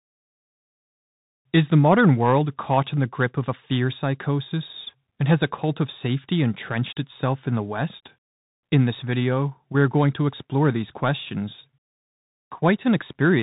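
From start to finish the speech carries the sound of a Bluetooth CVSD headset codec, and the damage is plainly audible. Nothing reaches above 4 kHz, so the top is cut away. Each sample is coded as a single up-or-down step, which fits a 64 kbit/s stream, and the step size can't keep pace with loud, bright sounds, so s sounds turn scratchy and a granular hiss sits beneath everything. That grainy, slope-overloaded texture is what sets it apart from a clean telephone band-limit.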